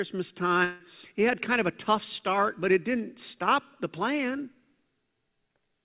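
From 0.64 to 0.82 s the speech gives way to a fading buzz of about 0.16 s, then resumes with that stretch gone, likely a long network dropout. Unlike a brief packet loss, the concealment spans an audible gap, though it never falls fully silent.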